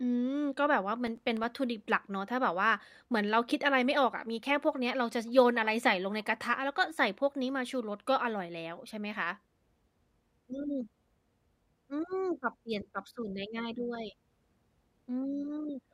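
From 1.07 to 1.44 s the speech carries processor overload crackle. The system repeatedly missed its deadlines for very short audio buffers, around 1.5 ms each, and each miss left a hard-edged silent gap. A handful of these dropouts form a brief gritty crackle over the speech.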